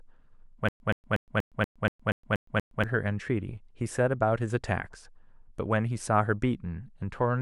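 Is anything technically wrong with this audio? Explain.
Yes. A stutter with silent gaps runs from 0.69 to 2.84 s. The playback likely stalled, and on each retry it replayed the last fragment of speech and then ran dry. A burst of about 124 ms repeats nine times, each followed by roughly 115 ms of dead digital silence, giving an even, mechanical beat of about 239 ms. Whatever speech should have played during that stretch never arrives.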